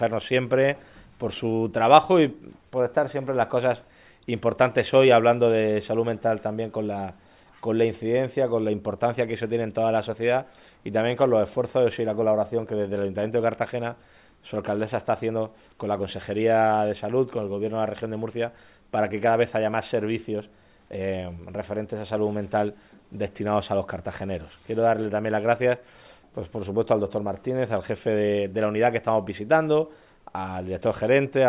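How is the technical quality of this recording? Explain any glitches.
No glitches to report: nothing audible in the recording points to a technical fault.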